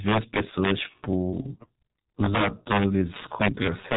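A speech recording carrying three faults. Integer overflow runs through the whole clip. The signal was driven about 5 dB past full scale, and instead of being limited, the loudest samples wrapped around to the opposite sign. Only around one percent of samples are affected, but each one jumps across the entire range, so the loudest moments break into sharp, violent cracks, harsher and more abrupt than ordinary clipping. The G.723.1 codec damage is also present throughout and is heavy. Nothing survives above 3.8 kHz, so the sound is muffled and narrow. The codec's slowly updated voice model and 30 ms frames give a hoarse quality and smear consonants together, which fits the low 6.3 kbit/s mode of this telephony codec. From 0.8 s to the end there is a time-stretched section. The pace abruptly drops to about two-thirds of normal speed while the pitch stays where it was. The slowed material drags. 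This is likely the result of software stretching that stretch of audio to fit a longer duration while preserving pitch.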